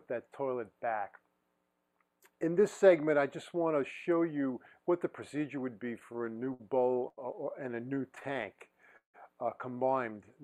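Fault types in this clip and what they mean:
Repeated stalls (stutter): the jitter buffer kept running dry because packets arrived late, so playback repeatedly held and extended the last sound before continuing, with nothing actually lost. Two bursts occur: 5.99–7.19 s with 9 stalls totalling about 208 ms (longest 82 ms), and 7.75–9.16 s with 14 stalls totalling about 298 ms (longest 170 ms). On a spectrogram these appear as short, smeared, frozen-looking patches; the waveform shows stretched, repetitive stretches breaking the normal envelope.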